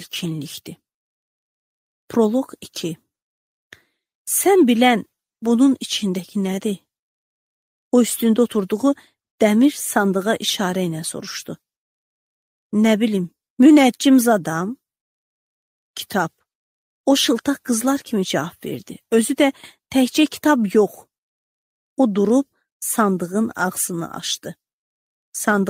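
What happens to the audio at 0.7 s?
Nothing goes wrong at 0.7 s; the audio runs through that moment intact, with no audible fault.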